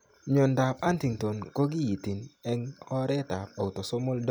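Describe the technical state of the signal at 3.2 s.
At 3.2 s the speech signal is intact, with no audible technical fault at that moment.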